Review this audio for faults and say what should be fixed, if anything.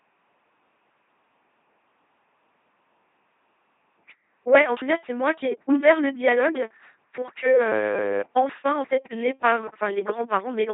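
The speech ran through an LPC-10 vocoder for its entire length, with heavy codec damage. Instead of preserving the waveform, the coder fits a short all-pole vocal tract filter to each frame and excites it with either a pulse train or noise, forcing every moment to be wholly voiced or wholly unvoiced. The result is a buzzy, mechanical robot voice, with buzz or hiss wherever voicing is misjudged and nothing above 3.8 kHz. That quality points to a 2.4 kbit/s channel. To prevent this, carry the audio over a link with enough bitrate for a waveform-preserving or modern speech codec rather than this vocoder.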